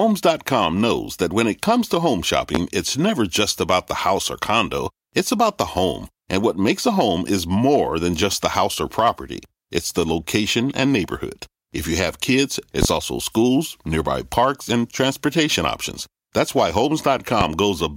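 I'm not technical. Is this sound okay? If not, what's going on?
No. Three loud pops, sharp thumps over the speech, which keeps going underneath: 2.55 to 2.59 s, between "it comes to home" and "it's never just about"; 12.83 to 12.86 s, after "you have kids"; and 17.41 to 17.45 s. Each is likely a brief electrical jolt, such as a plug, switch or static spark.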